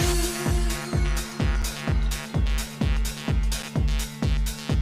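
The audio is delivered in 2 s chunks, and silence is inserted at each join instead of the next chunk following on seamlessly. This gap between chunks occurs at 1.62 s and 3.63 s. Each is a hole of 7 ms that interrupts the sound without removing any of it.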